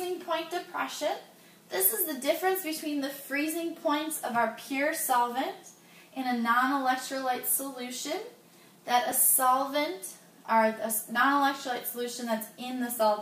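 A brief click at 9.11 s is a repeated buffer: new audio arrived late, so one tiny 2.9 ms block, fitting a 128-sample buffer, played twice.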